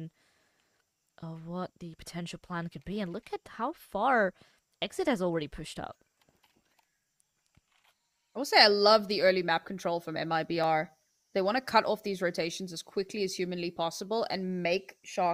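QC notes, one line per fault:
5.72 s and 10.64 s: dropped samples. Each is a single sharp click with no gap in the sound. The likely cause is a tiny loss of well under a millisecond of audio, so the waveform jumps straight to a later value. That step splashes briefly across all frequencies.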